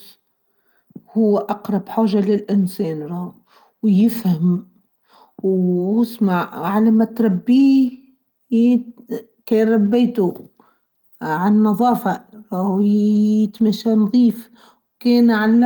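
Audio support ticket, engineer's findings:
Lost packet rebuilt from error correction at 13.15–13.17 s, 13.59–13.61 s and 14.25–14.27 s. Each is a 20 ms stretch that turns briefly rougher and noisier, with no gap. Opus in-band FEC: the next packet's low-bitrate copy was decoded in place of the lost one.

Short concealed packet loss at 13.57–13.61 s. A brief smear or wobble in the speech. About 20 ms missing, 18 ms filled by the decoder extending the preceding sound, then blending back. The last 20 ms overlaps the FEC rebuild at 13.59 s.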